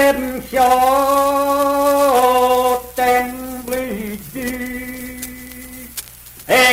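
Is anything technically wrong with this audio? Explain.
Yes. From 3.05 s to the end, the audio shows an adaptive stream at a lower bitrate. The connection slowed, so playback switched abruptly, with no gap, to a leaner encode. Codec artefacts rise, which fits a step down from 64 to 24 kbit/s Opus.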